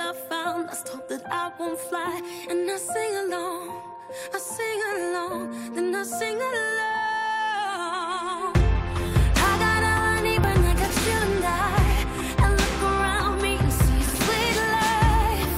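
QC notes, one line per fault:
10.44 s, overlap between stream segments: two segments' timestamps overlapped, so the player trimmed about 6 ms of sound that was never doubled, causing a tiny skip. The waveform shows an abrupt jump at the splice, and the spectrogram a thin vertical broadband line.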